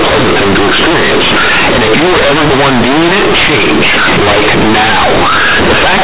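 From start to finish it's companded audio read as linear: A-law bytes played raw as 8-bit samples, so the speech comes out huge, buzzy and mangled, with loud hiss in pauses.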